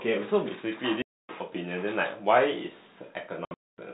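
A speech clip over a telephone-band G.711 path, hit by packet loss filled with silence twice: a solid gap from 1.02 to 1.29 s (about 270 ms), and scattered dropouts from 3.45 to 3.78 s, the longest run about 240 ms. The holes fall in steps that fit 30 ms packets, and they have hard edges. On a waveform they show as flat near-silent slabs with abrupt walls, and on a spectrogram as blank vertical bands bounded by thin broadband lines.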